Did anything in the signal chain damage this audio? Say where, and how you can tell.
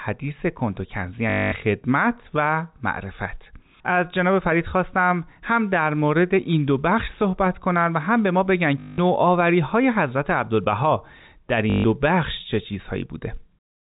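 Yes, at the network stage: packet loss with last packet repeated at 1.30–1.52 s, 8.80–8.98 s and 11.70–11.84 s. Each gap is filled by a robotic 50 Hz stutter, which fits 20 ms packets replayed.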